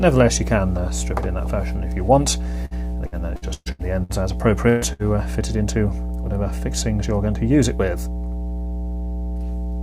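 Running under the whole clip is mains hum, a steady low tone at 60 Hz, which is what you get when a ground loop or a nearby transformer leaks the power line into the signal chain. It's not subtle. It sits only a few dB below the audio itself, so it's there as a constant drone from start to finish, and any low harmonics it carries will crowd the bottom end too. Between 2.65 and 4.12 s there's repeated packet loss, the robotic-sound pattern. Over that stretch of roughly a second and a half, packets went missing six separate times, the longest hole being 120 ms. Each time the receiver papered over the gap by extending whatever it had last played, and about 0.42 s in total, some 28 percent of the span, is filled in rather than real. You hear it as a choppy passage with bits chewed out of it. Shortly after come two isolated bursts of packet loss, one at 4.69 to 4.84 s and another at 4.93 to 5.02 s. 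In the first, the receiver stretched the last sound across about 118 ms while 120 ms of real audio disappeared. In the second, about 63 ms of continuation covers 60 ms that went missing. In each case the fill dips in level as it goes, landing as a held buzz or a fading hiss depending on what was playing, and the audio then picks up further along with the in-between part gone.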